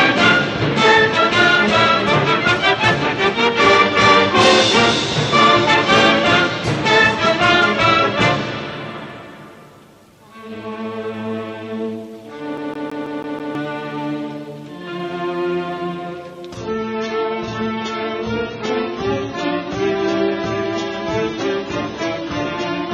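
CD stuck on one turn, from 12.57 to 13.55 s: a scratch keeps knocking the laser back one track, so a 163 ms slice of sound repeats six times, each pass cut by a brief mute at the jump, giving a rapid, perfectly even mechanical stutter.

Adaptive stream at a lower bitrate, from 16.58 s to the end: the player abruptly switches to a much leaner encoding with no gap, and the audio turns dull, with nothing above 7 kHz and smeared, watery artefacts. The sound points to a drop from roughly 96 kbit/s AAC to around 16 kbit/s.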